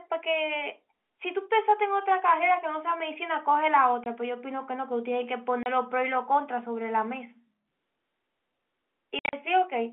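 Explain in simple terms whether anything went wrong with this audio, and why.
Short gaps of silence cut into the speech. This is packet loss filled with silence: bits of audio went missing, and nothing was played instead. Gaps fall at 4.04 to 4.06 and 5.63 to 5.66 seconds, then a cluster from 9.19 to 9.33. Their sizes suggest 10-millisecond packets. Each gap starts and stops abruptly.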